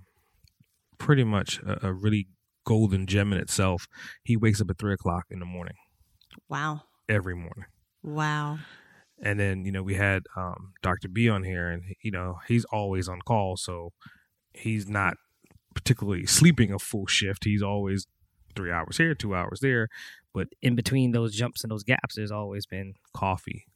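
A section at the wrong speed runs from 20.46 s to 23.05 s. For these two and a half seconds the speech plays 1.12 times faster than it should, and because speed and pitch move together, the voice rises by about two semitones and sounds high and hurried. The likely cause is that this stretch was played or edited against the wrong clock, so its samples were read out too quickly.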